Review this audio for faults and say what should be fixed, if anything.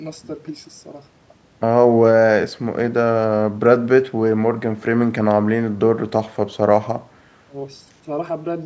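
No faults turned up in this audio, so nothing needs to be fixed.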